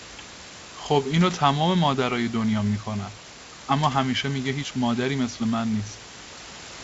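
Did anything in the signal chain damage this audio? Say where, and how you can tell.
No, nothing in the chain has damaged this speech. It shows the band limit of G.722 wideband telephone coding, with no content above about 7.7 kHz and at most a faint trace of the coding that fits its 64 kbit/s mode, and a steady room noise sits about 16 dB below the voice.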